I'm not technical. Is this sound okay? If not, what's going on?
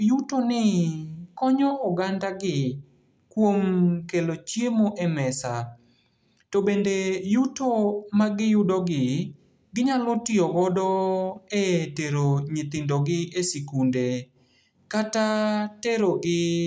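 Yes, this sound is okay, and there's nothing going on that needs fixing.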